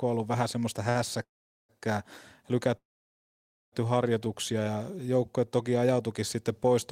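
At 0.89 to 0.97 s the speech hits a short stall from a late packet. A jitter buffer ran dry, so the last sound is stretched for about 58 ms with a slight buzz or dip before resuming where it left off. On a spectrogram the final frame's harmonics run on as flat horizontal streaks.

From 1.23 to 1.71 s and again from 2.77 to 3.74 s there is a call audio freeze, likely from packets held up in transit. Each begins with a brief fading buzz or hiss and then drops to near silence, about 430 ms the first time and 910 ms the second. The waveform goes almost flat and the spectrogram shows a blank band before the speech continues, delayed but complete.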